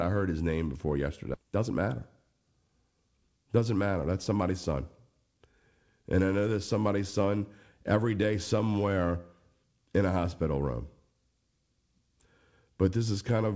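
This speech clip has a skip ahead at 1.34 to 1.36 s, right after "heard his name before". Roughly 0.7 s of audio is gone with no fill, and the two sides are butted together almost directly. This fits a late stretch being discarded while newer audio was already queued, which cut the playout delay by about the same amount. Immediately after, from 1.43 to 1.71 s, a jitter buffer speed-up runs the sound at about 114% of normal rate with unchanged pitch. Short pitch-period-sized pieces, about 50 ms in total, were removed to draw down excess buffered delay, so the phrase sounds briefly hurried. Across the clip the sound is band-limited with nothing above 8 kHz, consistent with a G.722 call path.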